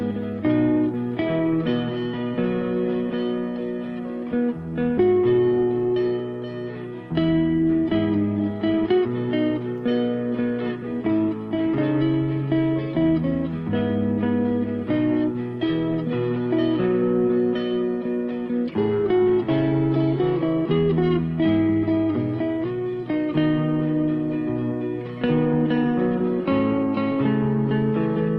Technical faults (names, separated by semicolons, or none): skip ahead